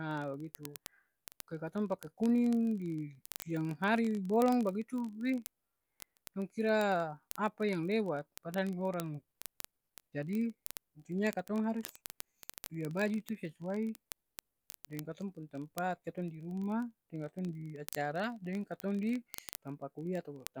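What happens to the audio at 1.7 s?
At 1.7 s the speech is overlaid by a rapid train of sharp ticks, roughly every 20 ms (about fifty a second), steady in rate but uneven in strength. These are word clock ticks, present from 0.11 s to 20.59 s. The receiving device runs on its own clock, off from the sender's by roughly a thousandth. Each time the two clocks slip past each other, a single sample is dropped or repeated, giving about a thousand ticks in all.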